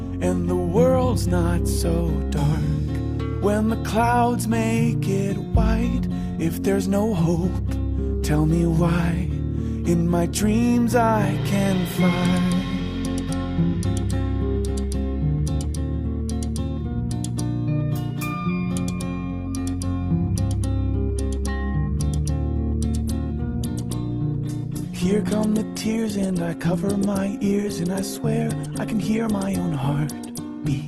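At 23.02 s the adaptive stream drops to a lower bitrate, switching abruptly and without any gap to a leaner encoding, which fits a step down from about 64 to 16 kbit/s Opus. Through to the end, nothing remains above 12.2 kHz, and codec artefacts thicken.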